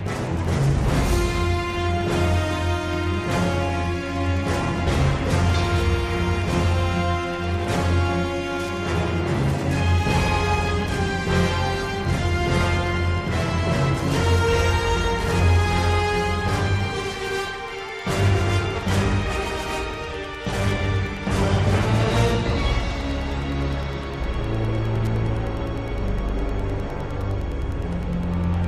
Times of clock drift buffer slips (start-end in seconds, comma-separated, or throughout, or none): 0.45-27.21